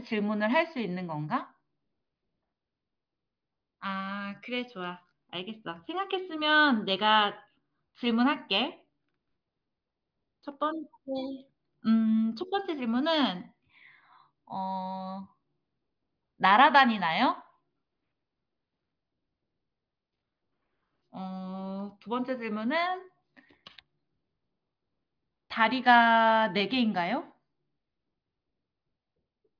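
Nothing technically wrong turns up anywhere in this speech recording, so there's no fault to point to and no time or cause to give.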